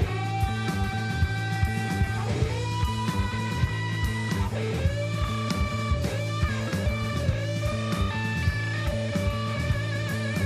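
Nothing stood out on listening to this audio.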